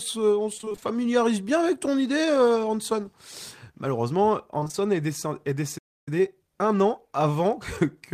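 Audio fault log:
0.57–0.84 s and 4.60–4.75 s, repeated packet loss (robotic sound): holes of up to 20 ms keep getting patched by repeating prior sound, nearly half of each span, giving choppy sound with pieces missing rather than silence.
5.78–6.08 s, playback stall: output drops to silence for about 0.29 s, then resumes, likely from the player starving for data; unlike concealed loss, nothing fills the gap.
6.08–8.06 s, time-compressed catch-up: the player trims its backlog by splicing out small pieces, so speech runs about 1.1 times faster at unchanged pitch, rather than with a chipmunk tone.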